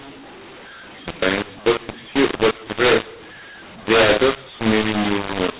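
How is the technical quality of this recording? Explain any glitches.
Poor: the recording carries one serious decoding fault for its whole length, on top of the narrow band-limiting of telephone coding.

mu-law and A-law mixed up, from start to finish: the speech was coded with G.711 A-law but decoded as mu-law. The two laws compress loudness along different curves, so each byte is mapped to the wrong level. Some samples come out too loud and others too soft, and even the quietest ones are pushed well above silence. The speech therefore sounds harsh and distorted throughout, and gaps between phrases fill with hiss rather than falling quiet. Nothing above 4 kHz is heard, which fits G.711's 8,000-samples-a-second telephone format.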